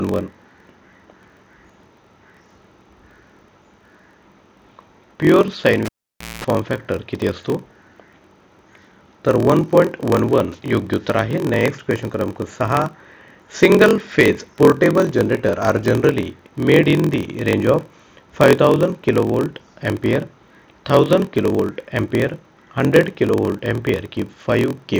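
A block size mismatch (padded) runs from start to finish. Each block is written short and the remainder zero-filled, so a regular gap sets up a 43.1 Hz buzz. The audio plays at 0.938 times normal speed with pitch essentially unchanged, which fits a 1024-sample read block.

At 5.85 s the cable is pulled and plugged in. A pop opens roughly half a second of near silence, then 0.2 s of 60 Hz mains buzz as only the tip makes contact. A second pop marks the signal returning at 6.45 s.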